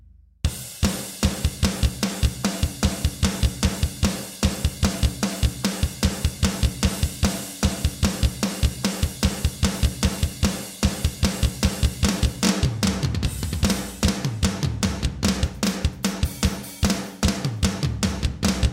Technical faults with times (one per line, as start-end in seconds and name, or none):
0.00-18.72 doubled audio track